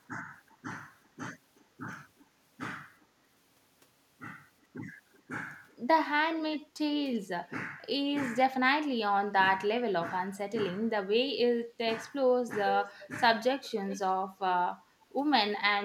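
Echo leak appears at 0.48–1.64, 2.18–2.26, 3.0, 4.62–5.76, 6.36–6.59, 12.84–13.08 and 13.63–14.09 s: a faint copy of the speech trailing by about 380–390 ms, likely a loudspeaker echo the far-end canceller missed. It grows from about 35 dB below the speech to about 15 dB below. On a spectrogram it shows as weak, delayed duplicate harmonics.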